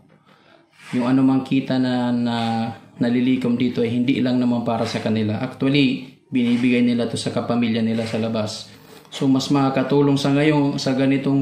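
No technical faults can be heard anywhere in the audio.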